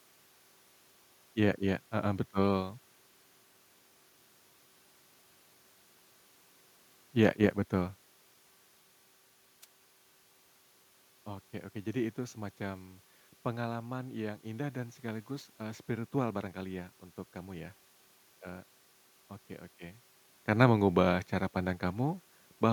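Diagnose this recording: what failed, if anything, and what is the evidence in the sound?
A brief swish of static cuts across the speech from 9.62 to 9.65 s, lasting under 40 ms before the sound returns clean. This is a wireless microphone noise hit, at the analogue radio link ahead of any conversion. As reflected copies of the FM signal partly cancelled at the receiver, the carrier faded and receiver noise rose through the audio for that instant. The level shifts near 8 s and 19.5 s are the talker moving, not this fault.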